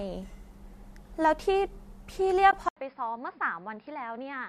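At 2.51 s the speech drops into a brief, soft-edged hole lasting until 2.53 s. This is AAC frame loss with muting. About 20 ms of audio went missing, which fits two lost frames. The decoder filled the gap with zeroed spectrum, so nothing plays there. The overlapping windows fade the sound down and back up. The edges are smooth.

From 2.69 s to the end, the sound changes character. It is most likely an input switched to a poorer device. An 80 ms silence marks the switch. After it, nothing is heard above 5.2 kHz, so the speech turns dull and boxy. The level falls by roughly 10 dB. New background noise appears, sitting around 45 dB below the speech. The lightly coded stream, likely low-delay AAC, carries all of this through.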